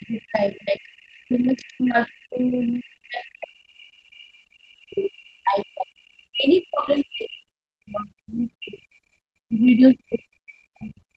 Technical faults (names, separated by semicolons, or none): speech suppressed in double talk; other side's voice leaking through